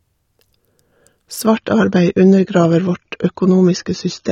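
At 1.46 s the speech drops abruptly, with no gap, into an adaptive stream at a lower bitrate until the end. On a spectrogram, energy above 6.9 kHz vanishes at a hard edge. The sound turns dull and smeared, which fits a low-bitrate AAC encode.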